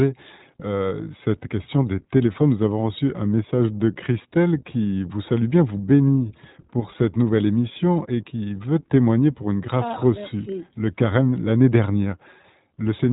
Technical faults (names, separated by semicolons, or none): iLBC codec